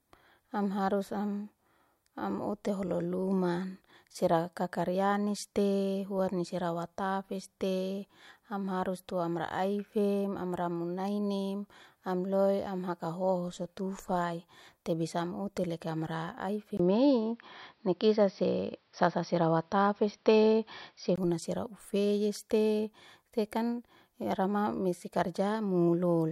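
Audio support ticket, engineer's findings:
Dull speech, level shifted ~5 dB, with faint new noise, 16.77–21.18 s, 20 ms gap at onset. Likely input switched to a poorer device; nothing above 5.8 kHz.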